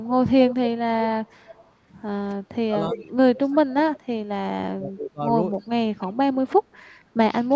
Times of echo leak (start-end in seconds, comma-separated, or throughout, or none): 0.04-0.56, 1.25-1.71, 2.94-4.00, 5.59-6.56